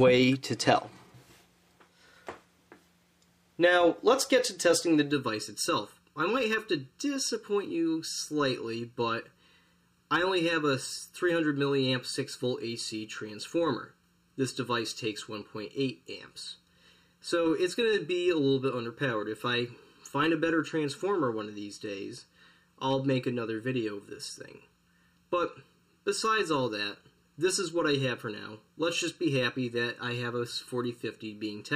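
From 5.11 s to the end of the clip, the sound turns hollow and phasey, with a fixed colour that doesn't move. The cause is channel delay (comb filtering): one channel runs a little under a millisecond behind the other, and when the two are summed to mono, what they share cancels at evenly spaced frequencies. The first notch sits near 700 Hz, with further notches repeating at regular intervals above it.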